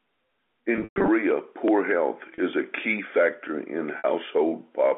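Packet loss with pitch repetition: from 0.76 to 1.08 s, about 220 ms went missing, the longest gap 120 ms. The receiver looped the last pitch period, so the speech holds, buzzes and fades. Shorter gaps follow at 2.34–2.38 s before "is a key factor" and 3.98–4.04 s after "a key factor in", each a brief held buzz.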